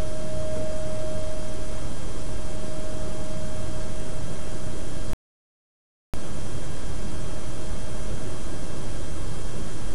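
A recording of sounds with a rebuffering stall from 5.13 to 6.14 s: playback runs out of downloaded audio, falls silent for about 1.0 s, then resumes exactly where it stopped. On a waveform this is a flat gap; a spectrogram shows a blank vertical band, with nothing skipped.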